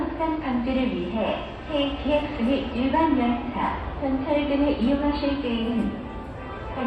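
No technical faults are audible.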